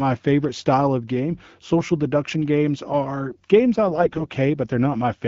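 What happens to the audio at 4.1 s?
At 4.1 s you're in the middle of a burst of AMR bit errors running from 3.88 to 4.28 s, right after "games are games I". That stretch fits about 20 codec frames arriving with flipped bits in their less protected parts, at an error rate of around 5 percent, while the checks on the critical bits still passed. The excitation pulses land in the wrong spots and the finer pitch, gain and spectral values drift. The voice keeps its pitch and level but turns hoarse, scratchy and gargly.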